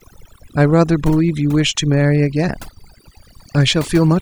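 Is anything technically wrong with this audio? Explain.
Yes, there are two faults.

Overdone noise removal runs throughout. A noise reduction stage set far too aggressively shuts off frequency bands whenever they sit near its noise estimate, taking quieter parts of the speech with them. The background drops and breaks up into twinkling specks.

A feedback whistle enters at 1.90 s and continues to the end. The likely cause is a loudspeaker-to-microphone loop held just at the edge of feedback, so one frequency keeps ringing without building up. It is a thin, steady tone at 4.6 kHz, roughly 20 dB under the speech, swelling and fading slowly in level.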